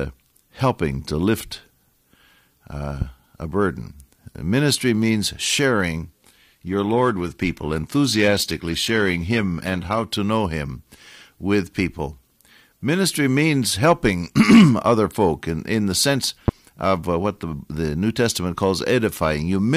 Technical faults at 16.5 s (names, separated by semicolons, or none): loud pop